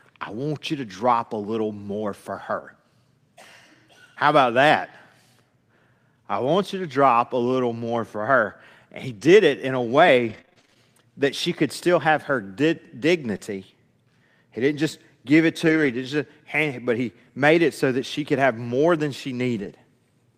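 Between 10.29 and 15.95 s, scattered short gaps appear: about ten late or lost packets, the longest around 30 ms, each patched by extending the preceding sound into brief ticks and smears.

From 19.57 to 19.71 s, a lost packet is rebuilt from error correction: what sounds like several lost packets were replaced by lower-bitrate backup copies, leaving about 80 ms rougher and noisier.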